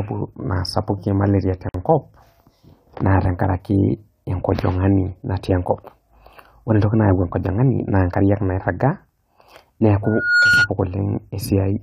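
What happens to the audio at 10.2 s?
Loudspeaker feedback squeal, 10.04 to 10.69 s: the mic hears its own loudspeaker, loop gain passes one, and a rising 1.4 kHz tone forms a spectrogram line.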